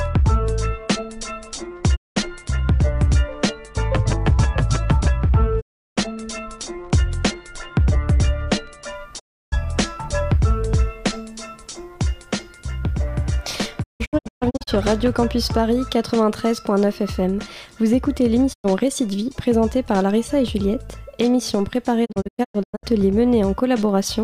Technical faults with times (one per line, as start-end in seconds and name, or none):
1.95-2.18 digital broadcast dropout
5.59-5.99 digital broadcast dropout
9.18-9.54 digital broadcast dropout
13.82-14.69 digital broadcast dropout
18.52-18.66 digital broadcast dropout
22.04-22.85 digital broadcast dropout